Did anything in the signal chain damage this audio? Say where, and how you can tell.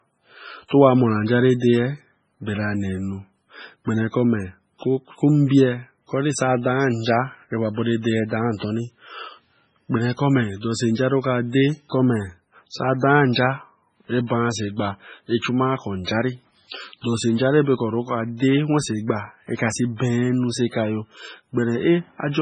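Yes, at the codec stage, throughout the speech: nothing survives above 9.8 kHz, and weak spectral detail flickers between frames into a watery swirl with chirpy s sounds. This heavy damage is likely MP3 compression at a starved bitrate, around 16 kbps.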